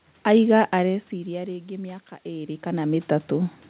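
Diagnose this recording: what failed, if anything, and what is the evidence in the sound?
The failure is in call processing: automatic gain rising. From 0.72 s the input drops by about 16 dB, and the AGC slowly lifts its gain by about 5 dB through 3.59 s, so the voice and room noise swell together instead of jumping back.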